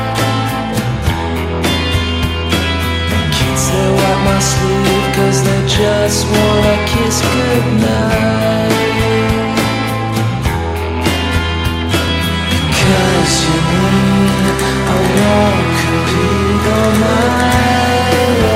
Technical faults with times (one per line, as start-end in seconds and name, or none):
12.08 dropped buffer (overrun)